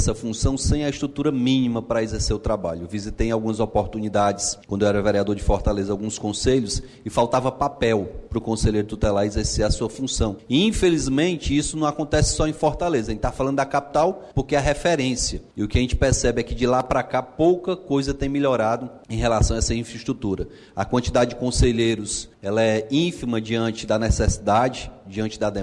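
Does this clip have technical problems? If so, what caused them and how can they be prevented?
No, nothing stood out on listening that would point to a technical problem in this recording.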